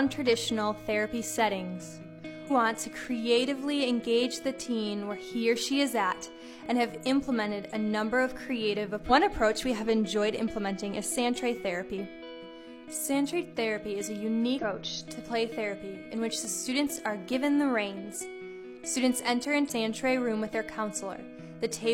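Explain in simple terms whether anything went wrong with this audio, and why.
Two things went wrong. The first is a repeated buffer: fresh audio reached the playback device late, so it replayed its last tiny chunk, about 1.5 ms long, which fits a 64-sample buffer. Because the chunk is so short, each repeat sounds like a click or quick buzz, at 1.23, 3.04, 6.66 and 16.45 seconds.

The second is damaged data in a compressed stream: some of the stored audio data was corrupted, so the decoder misread it and had to hunt for the next clean starting point. You hear a brief garbled chirp or blip at 2.47 to 2.51, 9.06 to 9.11, 14.59 to 14.84 and 19.65 to 19.71 seconds.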